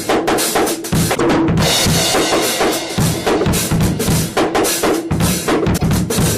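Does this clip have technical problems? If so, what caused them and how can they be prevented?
Yes. At 1.14 to 1.20 s and again at 5.76 to 5.83 s, the audio jumps ahead and each seam fills with about 70 ms of garbled audio, roughly two to three 26.1 ms frames' worth. This is likely a broken MP3 bit reservoir: frames were cut out, so the frames just after each cut reached back for borrowed bits and decoded someone else's bytes. To prevent it, cut or splice MP3 streams only after decoding, or with frame-aware tools that respect the reservoir.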